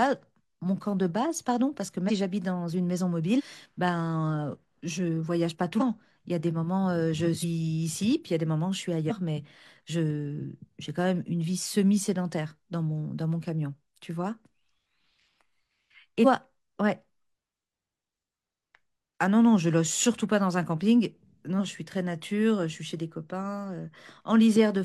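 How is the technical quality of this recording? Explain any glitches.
The recording has repeated compressed frames skipped, five dropouts in the speech. At 2.05, 5.76, 7.39, 9.06 and 16.21 s, a few whole codec frames of about 46.4 ms each go unplayed, so the speech jumps ahead by roughly 0.15 to 0.2 s.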